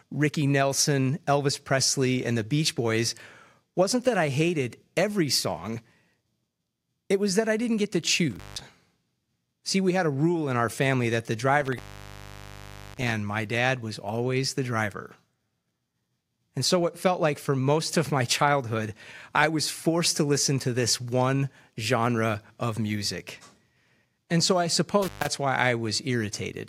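A speech recording with three dropouts from an intermittent contact, at 8.31–8.61 s, 11.60–13.11 s and 25.02–25.27 s. In each, a loose cable or plug briefly opens the signal path. The audio cuts out with crackle at the edges, and faint hiss remains while the line is open. The gaps last about 170 ms, 1.16 s and 130 ms, so the middle one is by far the longest.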